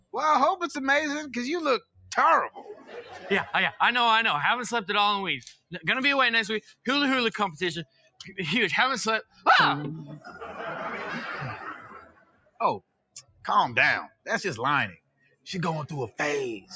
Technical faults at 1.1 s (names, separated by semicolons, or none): noise suppressor applied to music or sounds